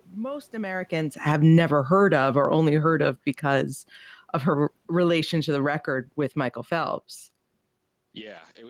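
Speech, with automatic gain falling from 1.12 to 3.81 s. The control judged the input too loud or its background noise too strong, and pulled its gain down by about 8 dB. The room noise sinks along with the voice. The level settles lower just before "of her relation to".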